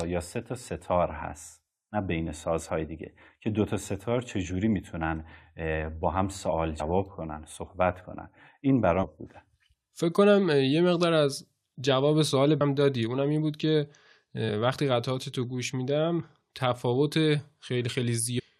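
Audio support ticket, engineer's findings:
Damaged data in a compressed stream: five short chirps or blips in the speech at 6.79 s, 9.02–9.05 s, 12.6 s, 14.48 s and 18.38–18.40 s, each 10 to 24 ms. Probable component: decoder input. Corrupt bytes cause misread frames, loss of sync and a search for the next frame header. Distinguishing point versus buffer underrun: corruption typically skips audio ahead, whereas an underrun stalls playback.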